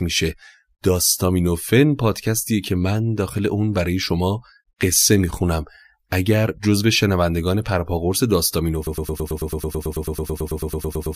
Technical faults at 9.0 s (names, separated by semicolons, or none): broken-record loop